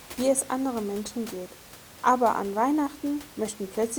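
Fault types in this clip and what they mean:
No faults are present in this speech clip.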